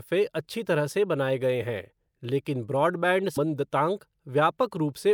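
Right after "गए हैं लेकिन ब्रॉडबैंड", at 3.36 s, compressed frames get skipped: the speech jumps ahead by roughly a fifth of a second, about seven frames' worth, which fits 26.1 ms codec frames.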